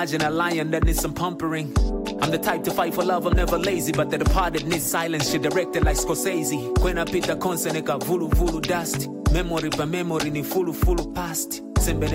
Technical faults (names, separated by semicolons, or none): none